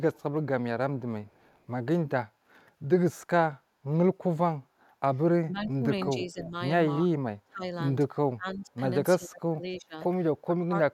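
Echo leak appears in this speech recording at 0.14–0.22 s and 1.25–1.6 s: a faint copy of the speech returns 299 ms later, roughly 35 to 40 dB down, likely because a far-end loudspeaker's sound slipped past its echo canceller and came back. Speech suppressed in double talk follows at 5.41–6.54, 7.04–7.64, 8.34–8.7, 9.17–9.97 and 10.45–10.75 s, where the talker's level dips in patches by around 25 to 35 dB, likely because the canceller mistook overlapping talk for echo and ducked it.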